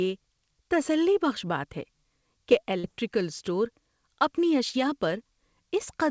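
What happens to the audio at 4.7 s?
At 4.70 to 4.75 s there is a short concealed packet loss: about 40 ms of the call arrived too late to decode, and the receiver covered roughly 35 ms of it by extending the preceding sound before blending back into real audio. It is heard as a brief smear or wobble. On a spectrogram the preceding sound runs on through the gap before normal detail returns, all below the 8 kHz ceiling set by the call codec. The waveform shows a filled stretch with a soft join at its end.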